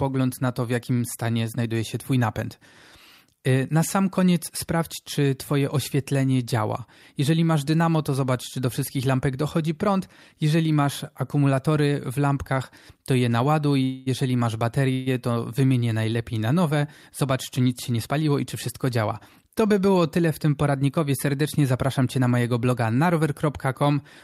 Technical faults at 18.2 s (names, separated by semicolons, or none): jitter buffer speed-up